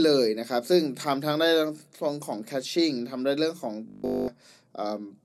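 From 3.88 to 4.30 s, the speech turns robotic. This is robotic sound from repeated short buffers. A rigid, metallic buzz at 50 Hz covers that whole stretch. It likely comes from a 20 ms chunk being replayed over and over while fresh audio arrived late.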